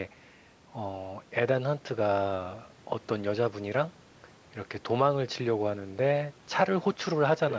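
At 7.5 to 7.55 s, right at the close of the clip, a brief second voice surfaces beneath the talker's speech, roughly 10 dB quieter. It is likely the other side's voice leaking through: the far-end audio playing on the device's loudspeaker was picked up by the microphone and not fully removed by the echo canceller. On a spectrogram it appears as a faint, separate harmonic pattern overlapping the main speech within the band that stops at 8 kHz. In the waveform it is a small added ripple on those 50 ms.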